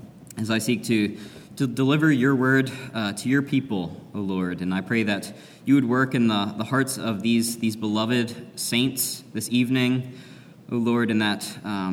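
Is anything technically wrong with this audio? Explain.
No, no technical faults detected.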